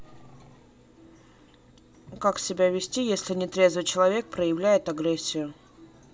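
No technical faults are audible.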